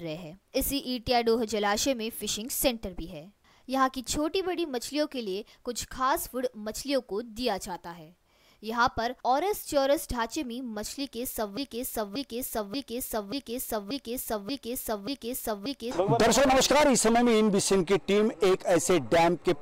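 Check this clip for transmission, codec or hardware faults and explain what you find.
One fault: from 11.57 to 15.91 s, a broken-record loop, likely a stalled player or stream resending its last fragment, so a 0.58 s piece repeats seven times back to back, replacing the audio that should have played.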